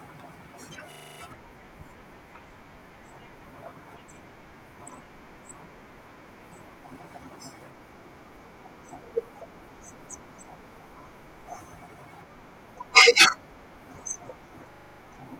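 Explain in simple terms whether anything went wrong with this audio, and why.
A system hang loop occurs twice, from 0.92 to 1.2 s and from 14.72 to 15.0 s. Each time, the computer briefly froze while the sound hardware kept replaying the same 40 ms scrap of speech seven times, producing a rough buzz that repeats 25 times per second.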